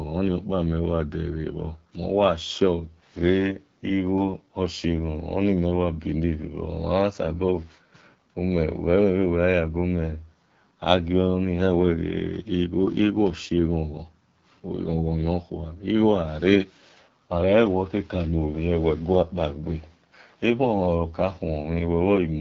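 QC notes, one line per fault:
Throughout, AMR wideband (HD Voice) codec: rough, raspy speech at a low rate, likely 8.85 kbit/s. Nothing above about 7.6 kHz, and the top band is noisy filler.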